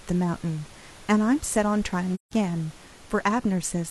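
At 2.14 s the speech fades into a soft-edged silence and fades back by 2.33 s. This is AAC frame loss with muting: about 0.17 s of coded audio, which fits four lost frames, was decoded as zero, and the overlapping windows softened both edges.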